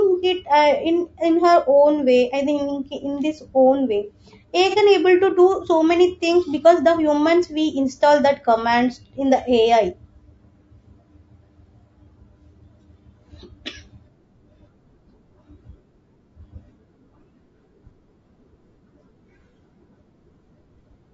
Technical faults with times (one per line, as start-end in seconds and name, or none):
0.00-21.13 low-delay AAC compression
4.70-4.75 AAC frame loss with concealment